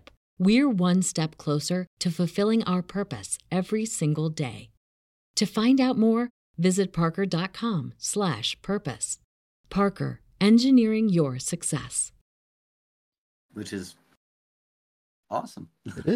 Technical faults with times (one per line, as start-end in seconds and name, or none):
none